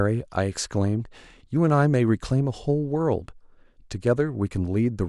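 Nothing in the recording stood out as a technical problem on listening.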